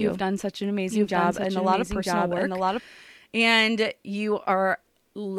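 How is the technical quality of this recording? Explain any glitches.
The recording has a doubled audio track from the very start until 2.8 s. A second copy of the speech runs about a second behind, roughly as loud as the first. It likely comes from the same signal captured twice through a slower path. The echo is dry and cuts off abruptly at 2.8 s.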